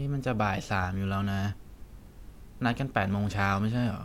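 Listening to this speech recording, nothing technical stood out at any point.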